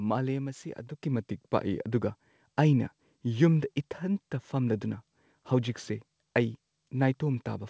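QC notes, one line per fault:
1.02 s, microphone volume stepped up: the speech and the room noise behind it both jump by about 7 dB in a single step and stay there. That's the call software deciding the mic was too quiet and raising the device's input gain all at once. Because the boost happens before anything else in the chain, the background lifts with the voice. The band-limit at 8 kHz from the G.722 call path doesn't mask it.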